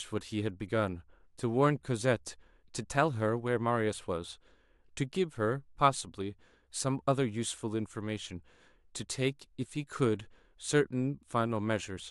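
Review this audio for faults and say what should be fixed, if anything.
Nothing in this speech recording needs fixing. No faults can be heard anywhere in it, so no repair or preventive change is called for.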